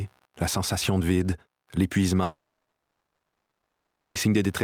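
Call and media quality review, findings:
Faint buzzing and chirping throughout, pulsing at roughly 70 per second, far below the programme level (around 45 dB down). Computer activity noise. Component: host PC ground shared with the audio interface. Mechanism: processor, graphics or mouse load swings shift that ground, so the buzz follows machine activity rather than the sound.

Long network dropout, 2.23 s to 4.18 s. Last sound smeared into a brief fading buzz, then roughly 1.7 s of near-silence. Audio resumes at 4.18 s with about 1.92 s gone. Component: network path or jitter buffer. Mechanism: likely packets stopped arriving, concealment stretched the final fragment, then gave up until the stream recovered.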